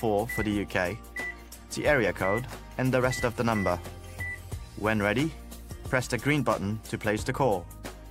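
Nothing technical goes wrong anywhere in the audio, so there's nothing to flag here.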